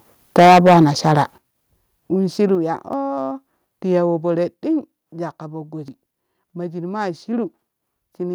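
Microphone overload hits this speech clip from 0.38 to 0.84 s, about 10 dB over the converter's limit with nearly a third of samples flattened, and briefly again at 1.1 to 1.2 s, about 1 dB over; the cut-off peaks crackle, likely from input volume set too high. Microphone volume stepped down at 0.39 s by about 3 dB, at 1.38 s by about 10 dB, and at 2.55 s by about 5 dB, each a sudden level drop, likely the call software cutting input gain after detecting overload. Audio missing between chunks occurs at 2.93 s and at 5.88 s, just after "jwakka poo", where roughly 50 ms vanishes and the sound jumps; the 3 s spacing is likely chunk-boundary loss.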